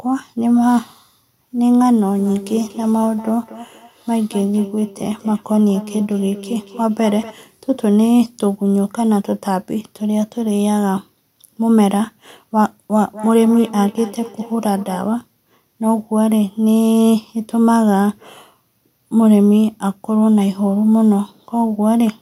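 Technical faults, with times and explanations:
2.19–7.40 s and 12.91–15.07 s, feedback echo between two devices: the speech returns at a fixed interval of about a fifth of a second, thinner and more ringing, peaking about 16 to 17 dB below the voice. A second device replays this one's microphone, which picks it up again, and neither echo canceller removes the other's playback.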